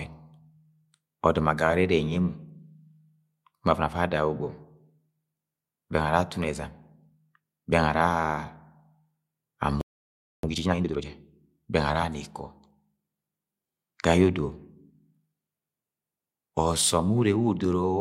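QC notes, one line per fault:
9.81–10.43 s, playback stall: the speech cuts out mid-flow and the output falls silent for about 0.62 s before sound resumes. The likely cause is the player's buffer running dry or its audio thread being blocked, so nothing was delivered to the output until it recovered.
10.43–11.05 s, time-compressed catch-up: immediately after the stall the speech runs at 2.0x its normal rate while keeping its original pitch, so it sounds hurried rather than chipmunk-like. The player is working off the backlog built up during the silence by dropping short segments and cross-fading across the joins, until normal pacing returns at 11.05 s.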